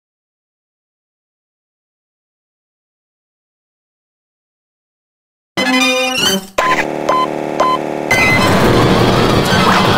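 From 3.28 s to the end at 9.98 s, a section at the wrong speed: the audio was likely played back against the wrong clock, running 1.96 times faster than recorded. Pitch rises with it by about ten semitones, so the sound turns high and hurried.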